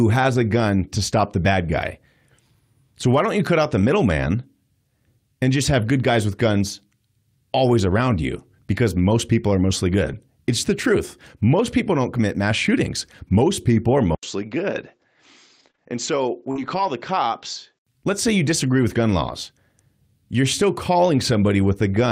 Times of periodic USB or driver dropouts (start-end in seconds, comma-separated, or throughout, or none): none